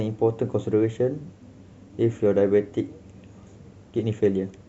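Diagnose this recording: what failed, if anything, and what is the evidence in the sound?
Nothing in the speech recording points to a failure at any stage of the chain, so there is no evidence to report and no mechanism to explain.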